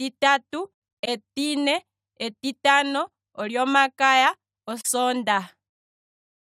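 AAC frame loss with muting: compressed frames went missing and the decoder zeroed their spectrum, so overlapping windows fade the speech out and back in. From 1.02 s, soft-edged gaps scatter over about 340 ms, the longest roughly 100 ms; a brief hole follows at 4.80 s.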